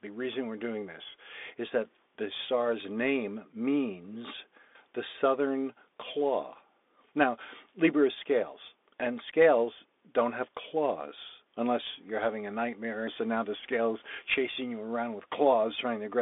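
Bluetooth CVSD headset codec damage runs through the whole clip: the speech is squeezed into a narrow band of roughly 250 Hz to 3.6 kHz, with nothing above 3.8 kHz. The one-bit delta coding, which fits a 64 kHz stream, plainly roughens sibilants and leaves a granular hiss.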